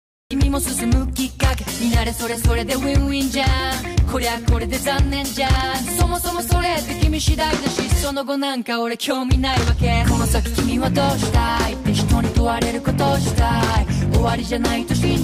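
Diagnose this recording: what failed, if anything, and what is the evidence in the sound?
Capture began late at the recording stage, producing a cut-off start: the recorder or stream was not yet writing when the sound was already under way. The clip holds digital silence from 0.0 to 0.31 s, then the audio appears abruptly at 0.31 s partway through an ongoing sound, with no natural attack or fade-in. Whatever preceded that point was never captured, so the opening arrives truncated rather than building up.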